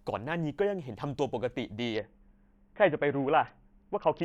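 From 1.95 s to 4.23 s a Bluetooth SBC bit pool drop dulls the speech's treble and adds gritty quantisation noise. The sound points to a bit pool cut from 31 to 6, near 55 kbps. A plain low-pass adds no grit, and packet loss leaves gaps.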